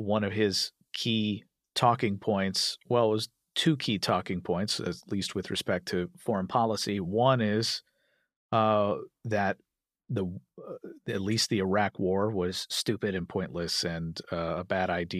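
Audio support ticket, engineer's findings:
Drift correction step, 6.15–6.98 s and 12.49–13.17 s: speech runs about 5.75% fast and a semitone sharp, then snaps back. Likely clock-sync resampler stepping its rate to rebalance the buffer.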